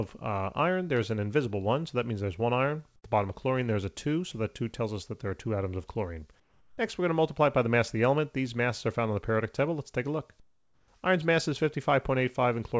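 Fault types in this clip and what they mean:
Comfort noise in place of the background: at 2.96 to 3.04 s, 6.40 to 6.78 s and 10.40 to 10.88 s, the quiet background turns into a flat, textureless hiss, about 16 dB, 5 dB and 6 dB quieter than the surrounding background. This is likely discontinuous transmission. The sender stopped sending during the pauses, and the receiver filled the gaps with synthetic noise, in a way that fits RFC 3389 comfort noise, until real audio resumed.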